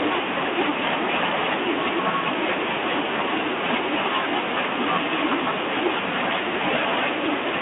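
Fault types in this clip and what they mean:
Nothing stood out on listening to this speech clip.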